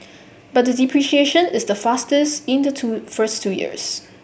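Nothing stood out as a technical problem on listening to this recording.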